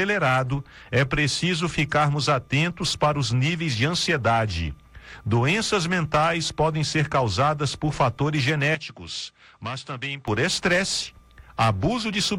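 At 8.75 s the sound turns duller and quieter, and it stays that way until 10.28 s. Nothing above 9.5 kHz gets through in that stretch, so the top end is clearly cut off. The level falls by around 10 dB. A faint new background noise sits well beneath the sound. There is no gap at either change. The likely cause is the input switched to a poorer device, a narrower-band microphone with its own tone and noise.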